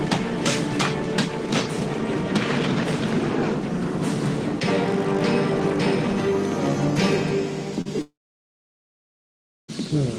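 A short concealed packet loss comes first: about 40 ms of the stream, from 7.81 to 7.87 s, failed to reach the decoder in time, so the receiver synthesised a 38 ms patch by carrying the preceding sound forward and then crossfading back into the real signal. The result is a quick smear or wobble at that point, where a brief detail of the audio can be replaced by the extended tail of what came before. Just after, from 8.01 to 9.70 s, there is a long network dropout, likely caused by roughly 1.7 s of incoming audio never arriving. The sound at 8.01 s stretches into a decaying buzz or hiss that fades within about a tenth of a second, leaving about 1.56 s of silence. At 9.70 s the audio resumes further along, and the gap it skipped over is simply lost rather than delayed.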